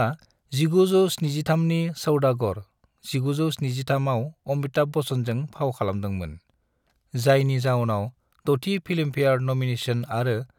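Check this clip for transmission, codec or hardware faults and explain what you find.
Nothing stood out on listening to this speech recording.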